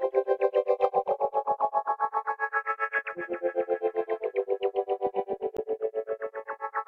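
At 5.57 to 5.59 s, damaged data in a compressed stream makes the decoder lose frame sync, giving a brief glitch. It shows as a broadband vertical smear and a waveform discontinuity.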